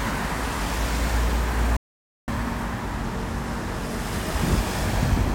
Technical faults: audio dropout to silence

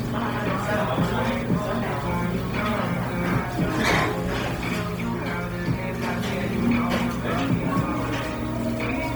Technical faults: Bluetooth LC3 compression

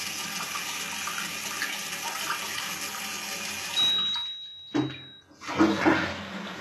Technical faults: HE-AAC compression

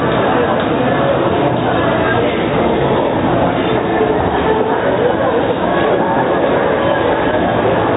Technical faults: loose connector crackle

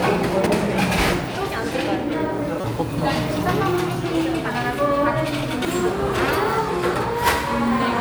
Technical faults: damaged data in a compressed stream

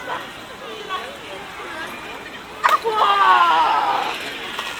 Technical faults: none

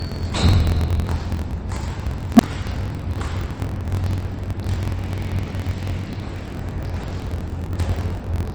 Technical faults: MP3 compression; block size mismatch (truncated); unstable filter

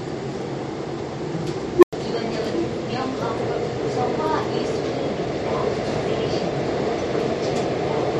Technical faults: unstable filter

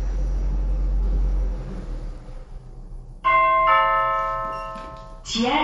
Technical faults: MP3 compression

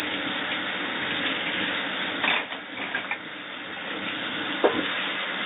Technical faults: none

